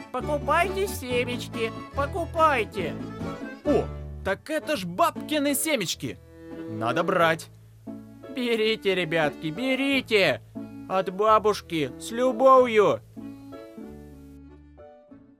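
Right near the end, from about 13.42 to 13.61 s, there's a short patch of DAB burbling. That's weak reception letting bit errors slip past the error correction into the MP2 audio, with a small residual error rate of about 0.07 percent. Corrupted samples put short noise blips in individual sub-bands and corrupted scale factors make sub-bands jump in level, so for that fifth of a second you get burbling over the sound, with 17 frames hit.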